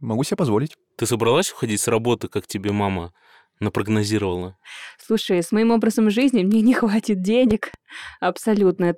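At 2.69 to 2.71 s there's a loud pop, a single sharp hit sitting around 10 dB above the speech, which carries straight on underneath it. Then from 7.51 to 7.76 s you get two more pops in quick succession, quieter at maybe 5 dB over the level. Both sound like a voltage spike getting into the chain, likely from a plug, switch, static discharge or a driver glitch, then shaped by the circuitry downstream.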